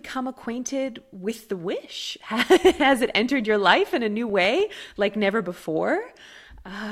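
A speech recording played from a disc with CD scratch ticks: a scratch or blemish passing under the laser on each rotation corrupts more data than error correction can rebuild, so the player patches those samples. Between 3.99 and 4.76 s this produces six short regular ticks, the longest only a couple of milliseconds.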